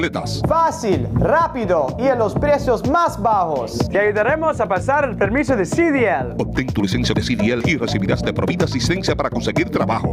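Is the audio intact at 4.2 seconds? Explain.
No. At 4.2 seconds the audio shows gain pumping, which runs through the whole clip. The level swings by around 15 dB. Loud and soft parts sit closer together than they should, so the sound feels squashed. The likely cause is input gain set far too high, with a fast limiter or compressor pulling it back down on each peak.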